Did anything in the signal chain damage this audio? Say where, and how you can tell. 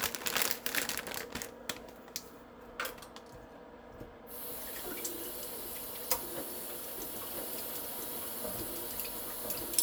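Yes. From 7.34 s to the end, a second, full-band copy of the sound runs about a second behind, around 5 dB quieter, with no decay or room colour, and it starts abruptly: a doubled audio track. This is likely a slower duplicate capture path or an editing overlap.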